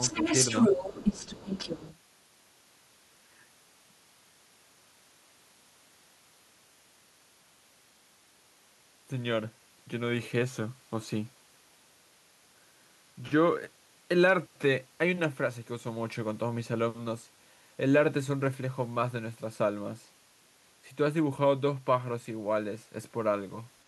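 From 0.0 to 1.98 s, the other side's voice leaks through. A second voice runs under the talker at roughly the same level. The likely cause is loudspeaker sound reaching the microphone that the echo canceller failed to remove.

From 0.15 to 0.25 s, the talker's speech is suppressed in double talk. The voice dips by about 5 dB for a tenth of a second. Both sides were talking at once, and the canceller likely turned everything down together.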